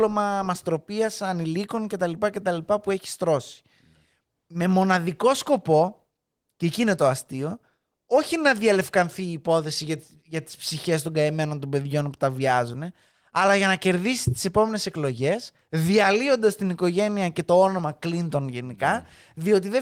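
No faults are audible in this speech, which has passed through Opus voice compression at 20 kbps in hybrid fullband mode with only light coding texture.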